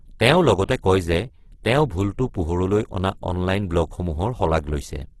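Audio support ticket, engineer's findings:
Opus compression, throughout the clip. Speech rough and grainy, harmonics smeared into noise, heavy damage, no content above 12.4 kHz. Likely cause: Opus music (CELT) mode starved of bits, consistent with a rate near 12 kbps. Encoder preserving each band's energy but refilling starved bands with folded or noise content, hence graininess rather than swirl.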